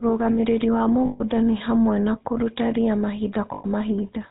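The whole clip has the GSM full-rate codec's signature: a buzzy, gravelly texture and nothing above 4 kHz, consistent with the old 13 kbps full-rate coder. It models the vocal tract and drives it with sparse, regularly spaced pulses, which is where the grit comes from.

Then there are two spots of lost GSM frames, at 1.06 to 1.21 s (about 140 ms, fitting seven 20 ms frames) and 3.54 to 3.65 s (about 100 ms). The decoder just repeats the last good frame, so you hear a rough, metallic ring smeared over the gap.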